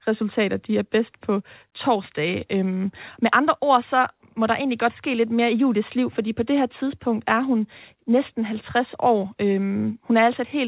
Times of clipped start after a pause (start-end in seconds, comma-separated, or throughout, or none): none